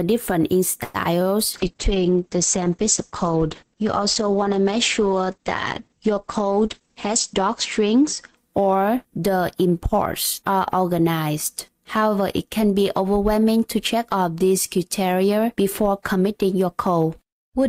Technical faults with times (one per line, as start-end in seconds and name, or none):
0.83-0.96 call audio freeze
1.04-1.07 short concealed packet loss
1.54-9.21 call bitrate drop
6.44-8.03 jitter buffer speed-up